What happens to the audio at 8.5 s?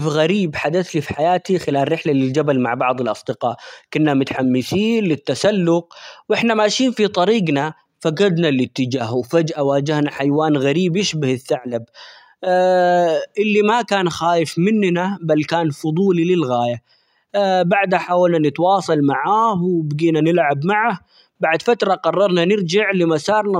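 Nothing goes wrong at 8.5 s; the speech carries on intact through that moment, with no dropout, click or distortion to be heard.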